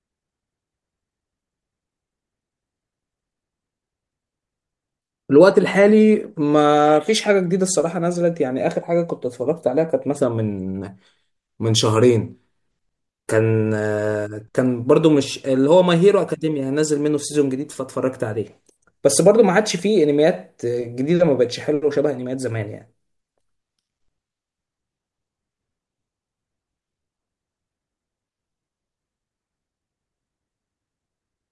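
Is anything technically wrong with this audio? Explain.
No, nothing is technically wrong.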